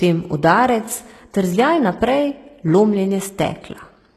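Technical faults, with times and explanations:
Throughout, HE-AAC compression: the sound has plainly audible codec damage, with nothing at all above 12.3 kHz and a top end that sounds bright but synthetic, giving the s sounds a gritty, lispy edge. That's likely HE-AAC, which fits a low bitrate of around 16 kbps. It codes the lower band properly and fakes the treble by copying lower bands upward under a rough envelope, so the harmonics don't line up above the crossover.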